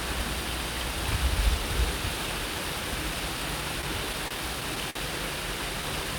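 From 3.81 to 4.97 s the sound drags and stutters, six brief hitches up to 52 ms each: repeated stalls (stutter), where late packets left the jitter buffer empty and the last sound was stretched to cover.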